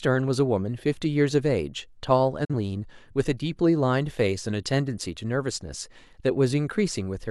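At 2.45 s the speech fades out over about 8 ms, and the sound stays silent until 2.54 s. This is a digital broadcast dropout. The receiver muted when it lost the signal or got corrupt data, a gap consistent with a single failed frame.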